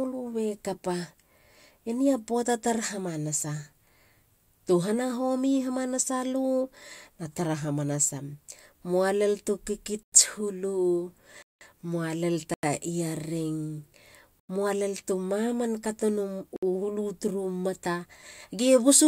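At 10.03, 11.42, 12.54, 14.40 and 16.56 s the speech drops into blocks of digital silence lasting about 93, 186, 93, 93 and 63 ms. The first four match whole buffers that likely weren't filled in time, fitting 4096 samples, with the second exactly twice that. The hard cut to silence and back, with no fade, sets these apart from a faded dropout or a smoothed-over gap.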